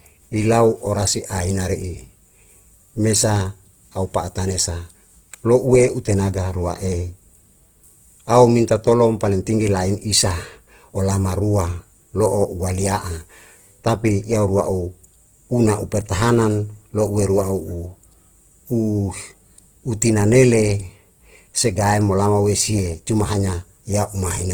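From start to finish the speech carries a grainy, rough texture, with tones turning noisy rather than clean, and the damage is plainly audible. That's most likely Opus compression running in its music mode: short of bits, the encoder keeps each band's energy but fills the detail by folding lower bands up or padding with noise. The band still reaches about 20.2 kHz, and the roughness fits a low bitrate around 16 kbps.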